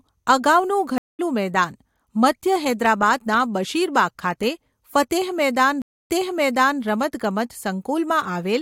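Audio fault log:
0.98–1.20 s, stream reconnect: the connection drops and the sound goes silent for about 0.21 s. When it comes back, a fresh decoder picks up mid-stream roughly a fifth of a second further on, so a short stretch of audio is simply missing.
5.82–6.82 s, stream reconnect: another dropout, this time about 0.27 s of silence. After the reconnect the server resends a burst, so playback restarts 0.73 s earlier and you hear that bit repeated.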